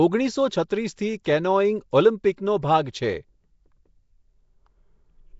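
From the start, the speech has a rough, hissy halo and a smeared, underwater quality, with nothing above about 7.7 kHz. This is likely Nellymoser compression, which gives each block a fixed, coarse bit budget and fills starved bands with noise. The damage fits a rate near 32 kbps.

At 0.68 s, a brief hiss of about 18 ms comes just before a sharp onset, which then lands softened. This is pre-echo: noise sized for the loud attack is spread across the whole transform block and leaks into the quiet moment before it.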